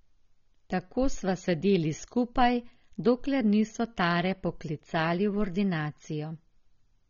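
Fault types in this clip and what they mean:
AAC compression: The speech sounds dull and smeared throughout, with a warbling, fizzy texture on sustained sounds and sibilants, and the damage is plainly audible. The likely cause is a perceptual coder discarding spectral detail at a very low rate, consistent with AAC-LC around 24 kbps. On a spectrogram, energy stops sharply at about 6.9 kHz, with patchy holes and blotchy bands below that edge. The waveform shows little unusual.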